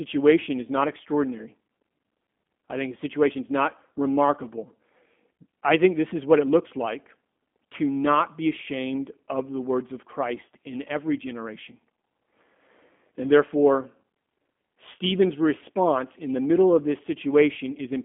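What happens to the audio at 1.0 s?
At 1.0 s the speech carries G.729 codec damage, which runs through the whole clip rather than starting there. The codec rebuilds each short frame from a vocal tract filter, a pitch predictor and a few pulses. That thin, low-rate reconstruction fits roughly 8 kbit/s. The sound is plainly rough and synthetic. It is also confined to a phone band of about 200 Hz to 3.5 kHz, with nothing above 3.6 kHz.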